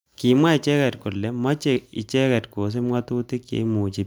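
No technical faults are audible anywhere in the speech.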